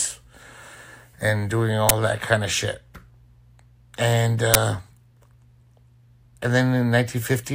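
An uninitialised buffer fault breaks into this speech clip twice, at 1.89 s and again at 4.54 s, each time as a brief, loud burst of harsh digital noise lasting about 11.6 ms. At those two moments the playback path sent out a block of memory before any audio had been written into it, so whatever stale values sat there were played as samples. The burst length fits a 512-sample buffer.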